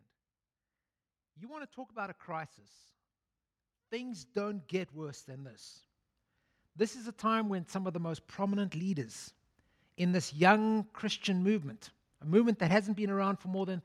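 From 3.9 to 5.67 s, then again from 6.59 to 9.02 s, automatic gain rising swells speech and background together, by about 7 dB and about 6 dB, as the gain control lifts a quiet input. On a waveform the envelope widens steadily; a spectrogram brightens across all frequencies at once.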